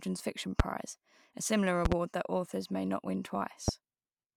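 A voltage spike, likely from a switch, plug contact or driver glitch, enters the chain three times as a loud pop: at 0.60–0.62 s, a double pop at 1.85–1.94 s, and at 3.68–3.71 s. Each is a sharp thump some 20 to 25 dB above the speech, which continues underneath.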